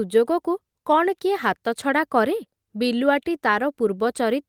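Speech recording with no audible technical faults anywhere.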